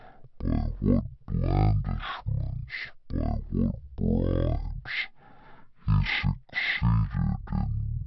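Speech throughout runs at half speed and a full octave low, a wrong sample rate fault, consistent with 48 kHz audio played at 24 kHz.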